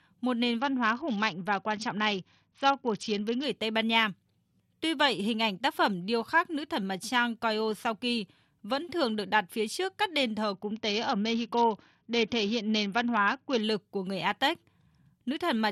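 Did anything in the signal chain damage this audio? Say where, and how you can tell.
Yes: a Bluetooth SBC bit pool drop at the codec stage, 0.59–3.44 s after "một nền" and 10.54–13.61 s after "trước các đền thờ". Treble dulls and gritty noise rises, and a spectrogram shows the top bands emptying. This points to a bit pool cut near 66 kbps, starving high sub-bands.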